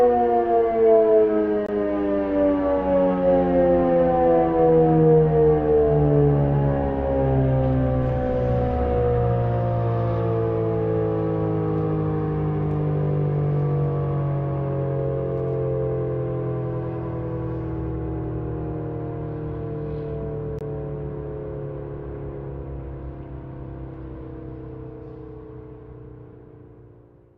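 At 1.66 s and again at 20.59 s the audio drops out into a block of digital silence lasting about 21 ms each time, a short hole rather than a mere tick. The output buffer went unfilled and zeros played in its place, with the identical length both times fitting a missed 1024-sample buffer. What sets this apart from a fade or concealed packet loss is the abrupt cut out and back with no taper.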